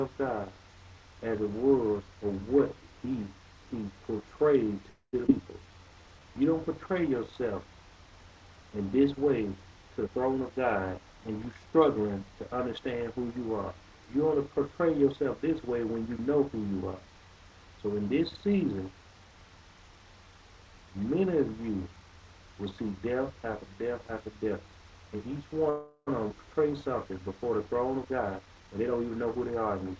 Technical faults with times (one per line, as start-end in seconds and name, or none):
4.90-5.15 call audio freeze
5.27-5.30 skip ahead
5.42-6.21 jitter buffer slow-down
10.00-11.73 jitter buffer speed-up
25.70-26.09 call audio freeze
26.29-26.32 skip ahead
27.95-29.85 jitter buffer speed-up